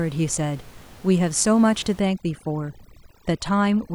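Overdone noise removal from 2.0 s to the end: suppression set too strong strips the room noise, about 25 dB below the speech, and faint speech detail, leaving twinkling specks.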